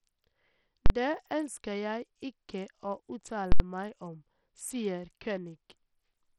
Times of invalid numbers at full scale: 0.86-0.90, 3.52-3.60

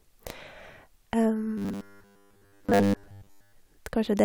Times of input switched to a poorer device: none

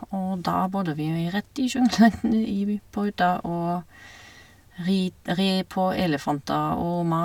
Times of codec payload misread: none

